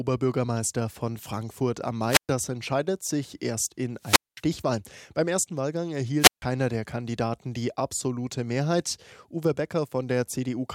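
A speech clip with three wireless microphone squelch dropouts. Each time the radio signal fades, hiss rises, and the receiver's squelch mutes the sound. The dropouts fall at 2.06–2.29 s, muting about 121 ms before "entscheidet sich erst in"; at 3.99–4.43 s, muting about 214 ms after it; and at 6.19–6.42 s, muting about 150 ms.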